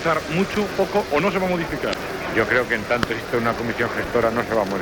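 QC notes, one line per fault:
1.90–1.95 s, damaged data in a compressed stream: a brief glitch lasting about 56 ms. A short stretch of the encoded data here is corrupt, so the decoder cannot read those frames properly. It outputs garbled content while it loses sync, then skips forward to the next valid frame header and resumes. That produces the abrupt glitch.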